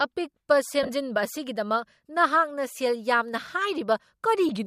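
At 0.83 to 0.89 s, lost LE Audio frames leave gaps scattered over 60 ms, the longest around 40 ms. The decoder repeats the last spectrum with scrambled phase, so the speech smears into noise. At 2.73 to 2.76 s, a shorter 22.5 ms loss smears the same way. Its length fits 7.5 ms frames, likely from LC3 coding.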